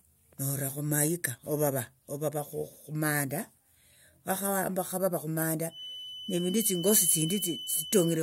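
From 5.67 s to the end at 8.23 s, a feedback whistle sits behind the speech: a thin, steady 3 kHz tone around 10 dB below it, swelling and fading slowly in level. The likely cause is a loudspeaker-to-microphone loop hovering at the edge of feedback. A spectrogram shows a narrow horizontal line at 3 kHz.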